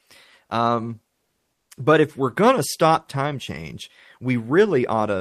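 A speech clip in which comfort noise replaces the background from 1.13 to 1.69 s, just before "but if we're going": a flat, featureless hiss about 4 dB quieter, not the silence a gate leaves, likely from Opus discontinuous transmission synthesising noise during the pause.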